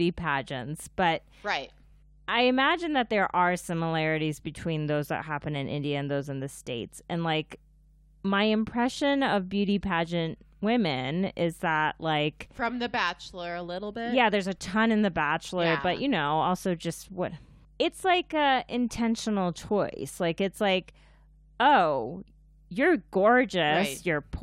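From the first second to the last, there's a mains hum sitting under the speech: a steady low tone at 50 Hz, with a bit of low harmonic buzz on top. It sounds like a ground loop or a nearby transformer bleeding the power line into the signal path. It's well below the talker, roughly 30 dB down.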